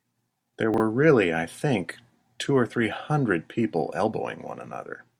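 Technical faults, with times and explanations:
0.74 to 0.80 s, chunks out of order: a 20 ms chunk of this speech plays two chunks late, leaving a brief jumbled moment with three hard joins.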